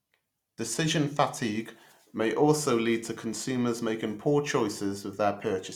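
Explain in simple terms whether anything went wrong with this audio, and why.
Nothing went wrong with this audio that a listener can hear.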